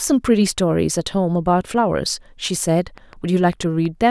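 From 2.98 s to 3.87 s a train of clicks sits over the speech: roughly five sharp pops at an uneven pace, about 4.6 per second, each reaching about the level of the speech itself. Likely cause is interference from nearby equipment or a faulty connection or power supply adding brief pulses. On a spectrogram each click appears as a thin vertical line spanning the full frequency range; in the waveform they are narrow, similar-shaped spikes at irregular gaps.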